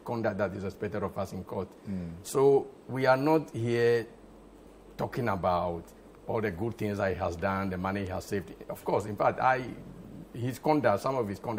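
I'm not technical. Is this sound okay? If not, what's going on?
Yes, no faults heard.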